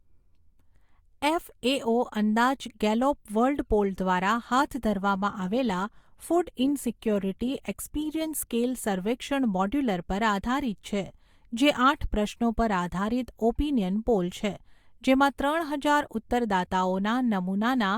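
Right after "ગેલોપ વર્લ્ડ પોલ દ્વારા", from 4.55 to 8.55 s, the speech abruptly gets grainier with more codec artefacts and no gap, then snaps back. That's an adaptive stream at a lower bitrate, which fits Opus dropping from about 64 to 24 kbit/s while the connection sagged.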